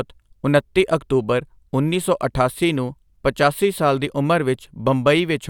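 No technical faults are audible.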